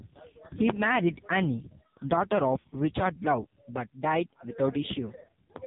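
From start to finish, the speech passes through the AMR narrowband mobile codec. Everything above 4 kHz is gone, so the sound is muffled and boxy. The codec rebuilds the voice from a vocal tract model fed with a few pulses. Here the damage is heavy. The voice sounds buzzy and synthetic, which fits a low mode near 5.9 kbps.

At 2.60 s, lost AMR speech frames cause a gap of 40 ms, ending at 2.64 s. That length fits two lost 20 ms frames. Radio errors corrupted them, so the decoder repeated the last good pitch and vocal tract settings at falling gain. The result is a short dip with a warbly, stretched quality. The voice then comes back briefly weak or rough.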